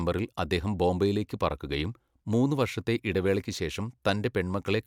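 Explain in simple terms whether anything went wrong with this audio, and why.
Nothing went wrong here: the speech comes across steady and intact, with no glitches, gaps or odd sounds anywhere in it.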